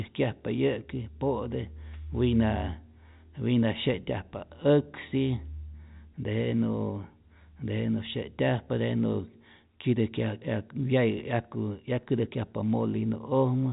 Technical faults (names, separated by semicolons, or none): none